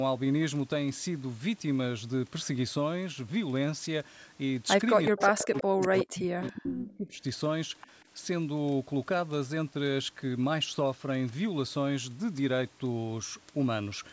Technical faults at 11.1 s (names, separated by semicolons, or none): none